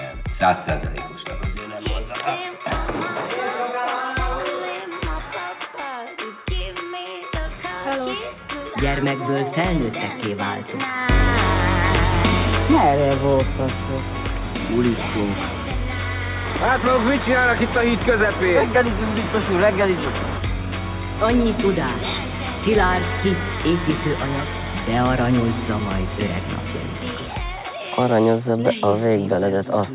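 No technical faults can be heard anywhere in the recording. Nothing in the sound calls for a fix.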